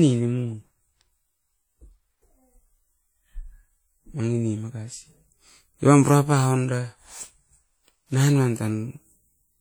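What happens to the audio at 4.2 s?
At 4.2 s the speech carries the same damage heard throughout the clip. It is likely WMA compression, at a rate that fits about 48 kbps. Quantisation noise smears over tens of milliseconds, so the sound rings and turns washy, with hiss that breathes.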